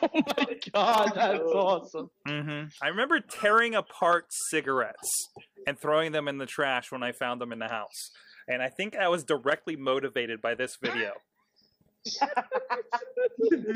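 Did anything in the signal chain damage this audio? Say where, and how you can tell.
No, nothing in the signal chain audibly damaged this audio. No stage between capture and playback leaves a mark that can be heard.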